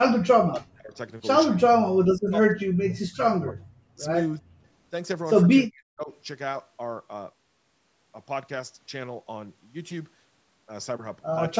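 The speech drops out in pieces at 0.0–0.16 s, 0.47–0.95 s, 1.58–2.0 s, 2.17–3.68 s, 3.94–4.02 s, 4.39–4.44 s and 5.66–6.1 s. The deepest cuts reach roughly 40 dB and the shorter ones about 20–25 dB, so the voice falls away sharply and then returns. This is likely speech suppressed in double talk. The echo canceller failed to separate the near talker from the far end's loudspeaker echo and attenuated both.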